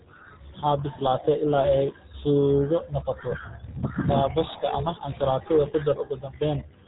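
From start to finish the speech carries RealAudio 14.4 codec damage: nothing above 3.8 kHz survives, and the coarse, gargly smearing fits a heavy 8 kbit/s dial-up speech codec. Unlike a simple telephone-band filter, the muffled sound also bubbles and warbles.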